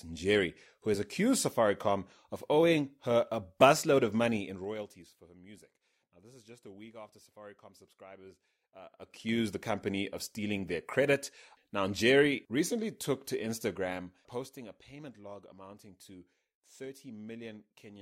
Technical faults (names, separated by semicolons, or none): zipper noise